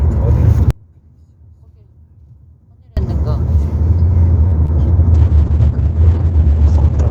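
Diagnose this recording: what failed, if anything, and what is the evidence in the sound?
From 0.71 to 2.97 s the sound falls by about 34 dB to a faint copy. The likely cause is one channel inverted in the analogue wiring, cancelling in mono.

At 4.47 to 4.54 s the sound is held for 43 ms. This is a short stall from a late packet in the network. The jitter buffer ran dry, then resumed.

At 4.66 to 4.70 s there is a brief smear. This is short concealed packet loss: 20 ms went missing and was filled by extrapolating the last sound.

From 5.15 s to the end, a call bitrate drop from 128 to 9 kbps hits the codec. The band narrows from 20 kHz to 8 kHz, sounding muffled and watery.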